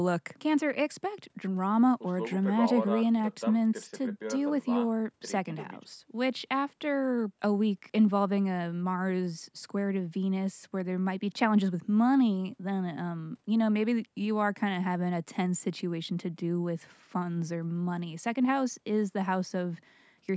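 No faults found; the speech carries the expected call microphone processing, with the lowest bass rolled off by its high-pass filter and no content above 8 kHz.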